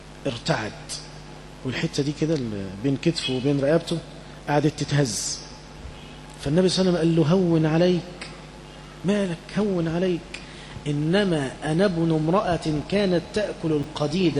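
At 13.83 s, near the very end, a block of about 5.33 ms reached the output two chunks later than it should have, so chunks out of order briefly scramble the sound's sequence. Nothing is dropped, but the late block plays after material that belongs behind it, leaving three abrupt joins in quick succession. The result is a tiny jumbled stutter lasting about 16 milliseconds.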